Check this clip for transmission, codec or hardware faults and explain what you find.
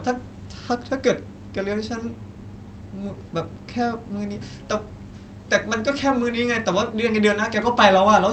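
No transmission, codec or hardware faults turn up here.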